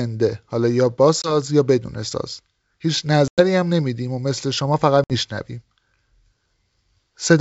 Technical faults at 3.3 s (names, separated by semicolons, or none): packet loss on an ADPCM call